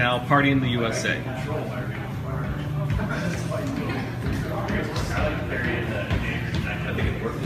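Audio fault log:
Nothing stood out on listening.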